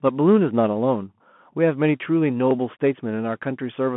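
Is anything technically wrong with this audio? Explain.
Yes. Throughout the speech, a Bluetooth CVSD headset codec reduces each sample to a single up-or-down bit with an adapting step, which fits a 64 kbps link. Nothing passes above 3.8 kHz, leaving a 150 Hz to 3.4 kHz telephone band, with scratchy s sounds, slope-overload distortion on loud high sounds and a granular hiss.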